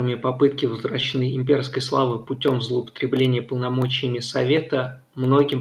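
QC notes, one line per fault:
1.01 to 1.03 s, skip ahead: the speech jumps abruptly forward, with no pause or filler at the join, and about 0.7 s of talk simply never plays. Audio that arrived later was already waiting, and the stretch in between was dropped, either lost in transit or discarded when the jitter buffer overflowed. The two sides of the missing section are butted together almost directly, so the delay falls by roughly the same amount in one step.
1.13 to 3.43 s, jitter buffer speed-up: for just over two seconds the talker sounds slightly rushed, running at about 106% speed while pitch stays unchanged. The jitter buffer was holding more audio than its target, so the receiver trimmed out many tiny slices, each one or a few pitch periods long, in quick succession. Taken together, around 0.15 s is shaved off, which pulls the delay back down without shifting the voice's pitch.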